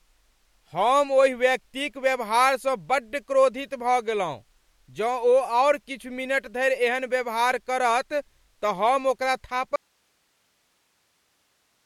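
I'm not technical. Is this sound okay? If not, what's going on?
No. At 9.76 s, right after "हम ओकरा", the speech suddenly cuts out and never returns. Only a very faint hiss remains to the end. This is an audio dropout to a faint residue, likely a loss of the signal feeding a still-live recording.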